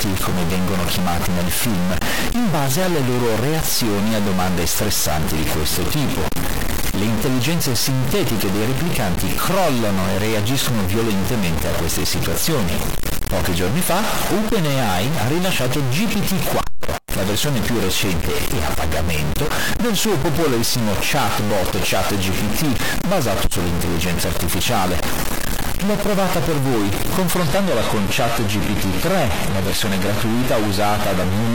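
Throughout the clip, one bit of the sample data is likely stuck at a fixed value, from a broken data line or converter. About half the samples are offset by that bit's weight, giving distortion on the speech and a noise floor that fills the pauses.

From 27.38 s to the end, an adaptive stream dropped to a lower-bitrate version when the connection slowed. The sound suggests a switch from AAC-LC at around 96 kbit/s to HE-AAC at around 20 kbit/s. The treble drops, with nothing above 14.9 kHz, and codec artefacts rise abruptly with no gap.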